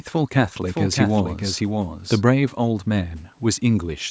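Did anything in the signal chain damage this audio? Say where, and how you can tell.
Yes, a doubled audio track from 0.62 to 2.22 s: a full-band copy about 0.7 s behind, a few dB quieter, with abrupt edges, likely a second capture path. A spectrogram shows repeated patterns, offset and hard-edged.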